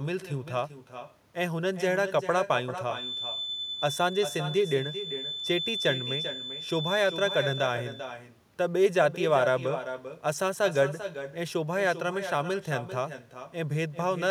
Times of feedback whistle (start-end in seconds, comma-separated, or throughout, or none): 2.86-7.79